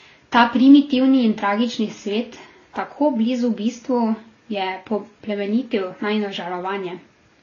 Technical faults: transcoding between lossy codecs

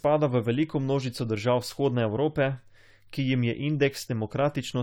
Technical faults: generation loss

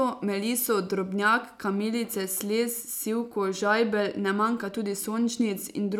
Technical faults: none

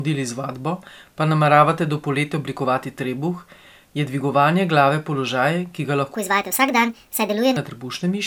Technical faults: wrong sample rate

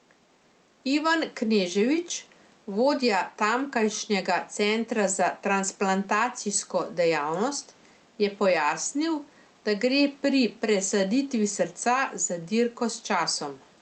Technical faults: gain pumping

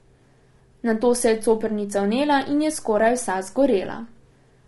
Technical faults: low-delay AAC compression

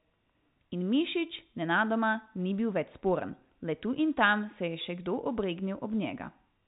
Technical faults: none

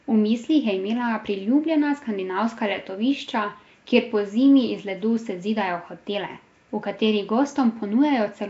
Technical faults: Nellymoser compression

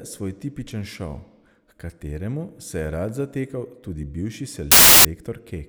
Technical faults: file tags played as audio

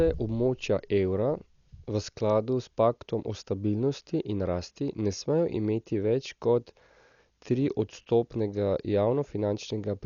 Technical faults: Dolby Digital compression

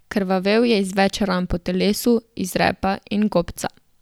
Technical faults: none

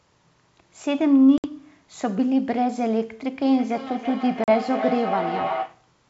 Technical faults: packet loss on an ADPCM call; feedback echo between two devices

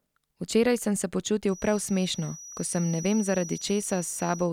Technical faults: feedback whistle

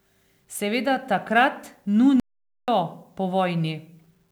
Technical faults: playback stall

